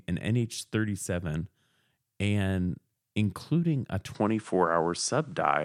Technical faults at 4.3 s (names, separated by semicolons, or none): input switched to a poorer device